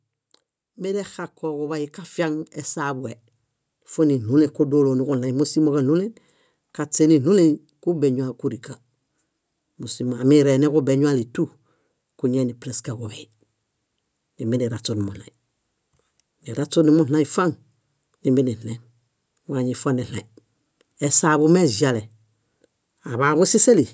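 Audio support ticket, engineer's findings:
Automatic gain rising, 0.74–5.51 s. AGC judged input too quiet and ramped gain up by about 10 dB over nearly 5 s. Speech and background noise swell together, no level step. Call mic processing band-limits to 8 kHz.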